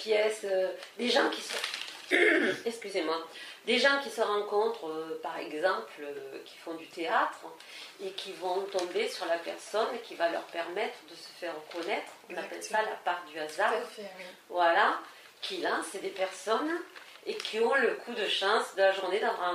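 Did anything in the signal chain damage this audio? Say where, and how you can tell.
No, nothing in the signal chain damaged this audio.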